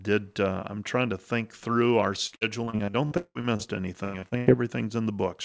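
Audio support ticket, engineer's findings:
Repeated packet loss (robotic sound) at 2.27–3.62 s, right after "to think through our", and again at 4.04–4.49 s. Choppy, with pieces missing. The jitter buffer keeps stretching the last sound over each hole, and the longest hole is about 179 ms. The 8 kHz top end fits a G.722 call path.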